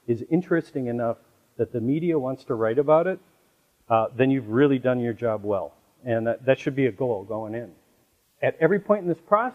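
At 3.43 to 3.48 s, and again briefly at 6.67 s, the audio shows DAB burbling. With weak reception, a small residue of bit errors, roughly 0.07 to 0.1 percent, gets past the error correction into the MP2 data. Corrupted samples put short blips of noise into single sub-bands, and corrupted scale factors make sub-bands jump in level for up to a frame. The result is a short burst of burbling over the programme, longer at 3.43 s, a brief blip at 6.67 s.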